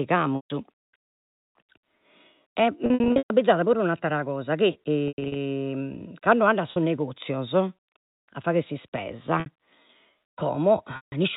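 Packet loss with pitch repetition at 0.36–0.50 s, 2.86–3.30 s (before "abbizada puru 'e un'attera"), 5.08–5.36 s, 6.72–6.76 s (between "ando a" and "negozios a fagher"), 9.40–9.46 s and 10.96–11.12 s. Lost stretches are filled by looping the last pitch period, heard as a held buzz fading toward silence. On a spectrogram this shows as frozen, flat harmonics, and the waveform shows identical repeating cycles with a decaying envelope. All of it sits inside the G.711 telephone band, which stops at 4 kHz.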